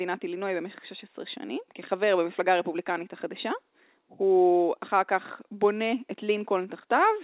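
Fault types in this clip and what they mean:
The speech carries no dropouts, glitches or other disruptions, and its bandwidth stops at 4 kHz, which fits narrowband telephone coding such as 64 kbps G.711 A-law on a call path.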